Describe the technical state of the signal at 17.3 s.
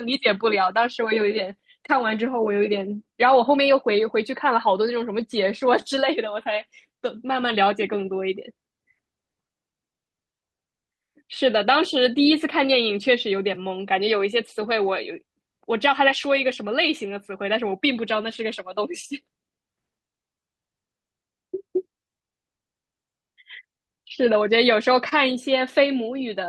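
Around 17.3 s the speech carries slight, unevenly spaced hiccups and a faintly unsteady tempo. These are repeated timing corrections, running from 0.34 s to 23.79 s: the receiver keeps repeating short pieces to stay in step, so playback runs at 99% speed and stretches the stretch by roughly a third of a second overall.

The underlying cause is clock drift between sender and receiver, present throughout. The sender's clock runs about 1% slow, so the jitter buffer keeps draining and must be padded with those small repeats.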